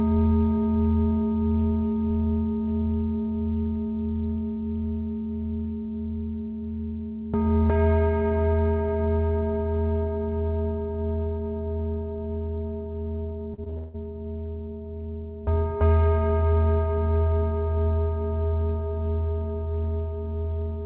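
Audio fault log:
13.54–13.96 s, repeated packet loss (robotic sound): over this short stretch the stream drops out five times in quick succession, the longest hole about 160 ms. Each gap gets patched by stretching the last bit of sound, so roughly 62% of the span is filler, and that looping gives it the choppy, robotic edge. It all sits inside a band topping out at 4 kHz, which fits a narrowband call codec like G.711.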